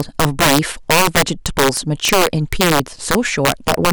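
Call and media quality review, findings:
Integer overflow throughout: violent cracks on loud speech peaks, sharper than clipping. Gain about 8 dB too hot; a few percent of samples wrap to opposite sign instead of limiting.

Periodic USB or driver dropouts, 1.28 to 3.28 s: regular ticks every 0.5 s. Bus or driver stalls blank a fraction of a millisecond with silence, about five times.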